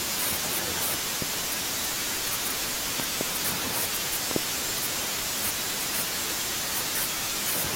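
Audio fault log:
1.22–1.36 s, 3.00–3.23 s, 4.31–4.38 s: loud pop, double thumps about 10–15 dB above the speech, likely voltage spikes; unlike a dropout, the speech continues underneath.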